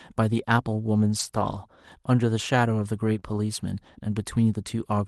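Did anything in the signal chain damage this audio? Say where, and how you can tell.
Yes. From about 1.19 to 1.57 s the sound turns rougher and noisier but never drops out. That points to lost packet rebuilt from error correction at the network stage: about 200 ms of packets went missing, and the Opus decoder played the low-bitrate copies carried in the packets that followed.

Around 3.19 to 3.23 s there is a brief smear, a momentary wobble where the sound seems held rather than continuing. This is short concealed packet loss. Roughly 20 ms never arrived in time, so the decoder extended the preceding sound to fill the hole, then blended back into the real stream.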